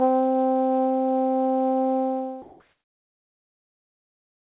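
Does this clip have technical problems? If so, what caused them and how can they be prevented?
Yes. Comfort noise replaces the background. The sender's voice detector likely took the quiet tail of this music as silence and stopped transmitting, so the receiver filled the gap with synthetic noise. From 2.42 s to the end at 4.41 s, about 2 s in all, the real background sits about 48 dB below the loud passages and is replaced by steady, featureless hiss that shifts the level by about 2 dB. This overlaps the fade-out that runs from around 2 s to 2.58 s, through a call path with nothing above 4 kHz. Disabling discontinuous transmission, or using a music mode for the link, prevents this.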